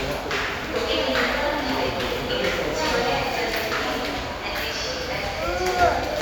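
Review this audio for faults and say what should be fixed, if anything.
No faults found; nothing needs fixing.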